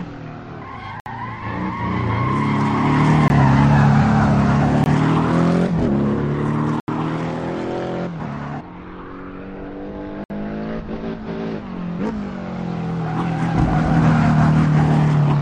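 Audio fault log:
1.00–1.06 s, 3.28–3.30 s, 4.84–4.86 s, 6.80–6.88 s and 10.24–10.30 s: block of digital silence. The sound cuts out abruptly and returns with no fade. The 60–80 ms gaps read as short holes, which points to output buffers not being filled in time.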